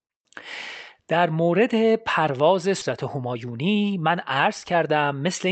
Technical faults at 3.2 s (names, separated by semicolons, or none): jitter buffer speed-up